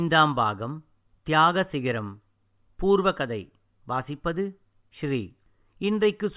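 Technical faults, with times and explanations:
No technical faults can be heard.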